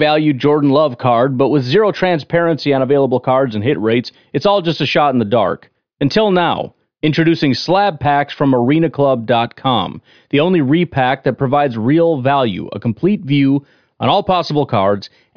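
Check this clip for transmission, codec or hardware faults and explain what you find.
I hear no faults anywhere in this speech recording.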